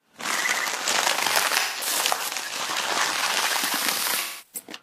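At 1.57 s the audio goes smeared and noisy for about 170 ms, until 1.87 s, and again from 4.19 s to 4.66 s for about 340 ms. This is AAC frame loss with concealment: the decoder lost data and rebuilt each gap from the last good spectrum. The lengths fit roughly four and eight missing frames. On a spectrogram each gap is a blurred, frozen block without fine detail, and the waveform loses its normal shape there.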